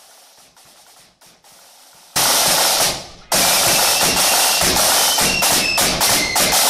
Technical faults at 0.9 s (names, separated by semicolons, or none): audio dropout to a faint residue